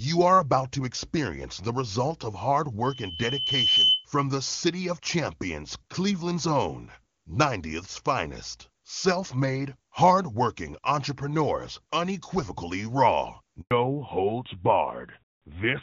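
From 2.85 to 4.06 s a loudspeaker feedback squeal rises out of the speech: a single 3 kHz tone that swells over about a second to a few dB above the voice before it is cut off. The mic is re-amplifying its own loudspeaker at that one frequency. That gradual build is what separates it from a steady interference whine, which would start at full level.

At 13.61 s a handover gap of 100 ms drops the speech to clean silence while the call switches networks. Packet-loss concealment would smear or repeat the last sound. Here no frames arrive at all, and the sound quality changes when audio returns.

From 13.71 s to the end is a fallback to narrowband. Before it, the AMR wideband (HD Voice) codec carries the speech with its upper range intact, which fits the 23.85 kbit/s mode. After it, nothing above 4 kHz remains, consistent with AMR-NB at 12.2 kbit/s, and the voice turns duller and rougher. A simple low-pass filter would not start right after a dropout, and it would not add that coarser texture.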